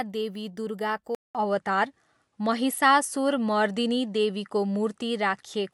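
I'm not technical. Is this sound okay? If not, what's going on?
No. At about 1.15 s the speech drops out for a fifth of a second, and from then to the end it sounds a little duller and changes in loudness, with a different faint background hiss. Nothing above about 11.4 kHz comes through after that point. This is the signature of an input switched to a poorer device: the recording likely jumped from one microphone to another, lower-quality one that captures a narrower range of sound.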